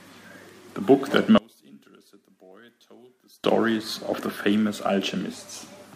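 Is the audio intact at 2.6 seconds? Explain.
No. From 1.38 to 3.44 s one channel inverted is the likely cause of the speech dropping by about 30 dB: with reversed polarity, centred content cancels when the channels are summed, leaving only a faint residue of their difference.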